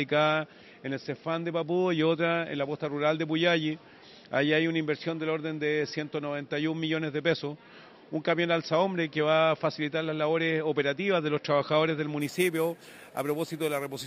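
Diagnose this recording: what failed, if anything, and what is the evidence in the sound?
Rate-conversion stage: from 12.21 s to the end, sample-and-hold upsampling from 12 kHz to 44.1 kHz leaves imaging, a metallic fizz at 6 to 12 kHz, about 17 dB down, following the sound's level and moving against its pitch.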